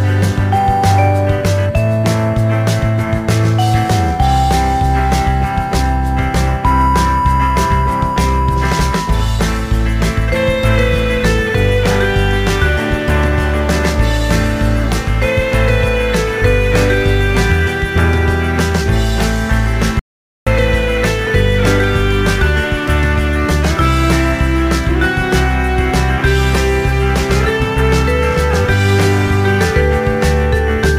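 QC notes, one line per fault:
19.99–20.47 s, audio dropout to silence: the signal stops abruptly mid-flow and returns just as abruptly after about 470 ms. The gap is silent, with no room tone or noise floor underneath, so the recording chain kept writing silence while nothing reached it. The likely cause is a momentary loss of the input, such as a disconnected device, a failed link or an accidental mute. Whatever sounded during that half-second is unrecoverable.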